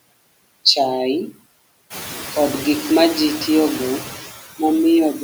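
Throughout the speech, noise suppressor artifacts are present: the suppressor pulls down each frequency band it judges to be steady noise, frame by frame, cutting the background by about 19 dB in the pauses while letting it come back up beneath the speech. From about 2 s the room noise climbs by roughly 12 dB. A spectrogram shows speckled, blotchy noise patches switching on and off between frames.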